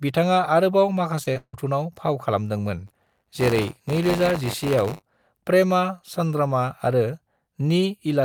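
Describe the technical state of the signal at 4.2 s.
At 4.2 s the speech is inside a stretch of buffer tearing running from 2.86 to 5.07 s. The playback write and hardware read positions have drifted into each other, so each period contains a small slice of stale audio, a few tens of milliseconds old, spliced in with hard edges on both sides. Repeating at 100 Hz, these joins point to a buffer period of about 10 ms and produce a steady robotic buzz that rides on the speech and stops in gaps.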